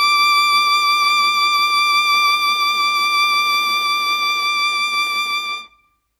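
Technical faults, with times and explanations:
No technical faults can be heard in this music clip.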